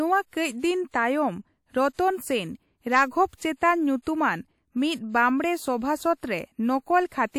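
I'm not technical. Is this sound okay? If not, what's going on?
No. Just before two sharp sounds in the speech, around 1.93 to 1.99 seconds and again around 3.56 to 3.61 seconds, there's a brief hiss lasting under a tenth of a second, and the sharp sound itself comes out softened. This is pre-echo. The audio was squeezed down in chunks, and the roughness meant for the loud moment leaked back into the quiet just before it.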